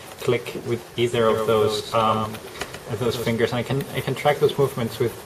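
From 1.29 s to 3.33 s a doubled audio track appears: a second, full-band copy trails the original by about 150 ms at roughly 5 dB lower, with no decay or room colour, starting and stopping abruptly, likely from a slower second capture path.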